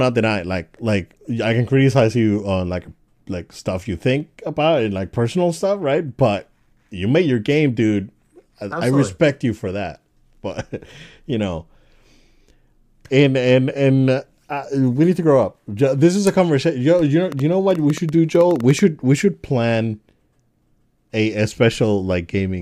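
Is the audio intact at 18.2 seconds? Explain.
No. From 17.32 to 18.80 s a train of clicks runs through the speech, likely from electrical interference or a faulty connection or power supply injecting pulses. Roughly fifteen similar clicks arrive unevenly, near 8.9 per second, ticking about 5 dB above the speech.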